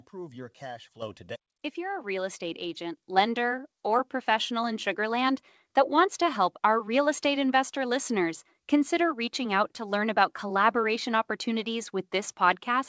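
At 1.02 s the level jumps by about 9 dB, and at 2.04 s it jumps again by about 4 dB. That's the microphone volume being stepped up: the call software decided the input was too quiet and raised the device gain in one go, twice. The speech and the background noise rise together each time, which is the giveaway. All of it sits on a call path where nothing above 8 kHz comes through.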